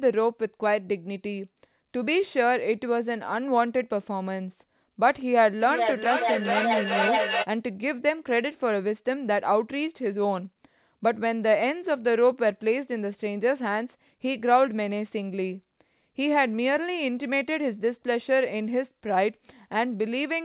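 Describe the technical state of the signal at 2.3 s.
At 2.3 s the speech is intact, passing through the call path with its usual G.711 coding and nothing above 4 kHz.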